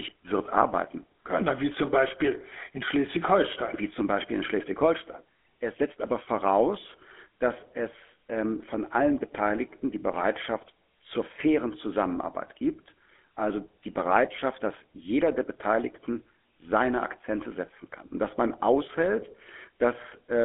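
Right through the clip you get the GSM full-rate codec's buzzy, gravelly edge, with nothing above about 3.8 kHz and a thin 250 Hz to 3.5 kHz line band.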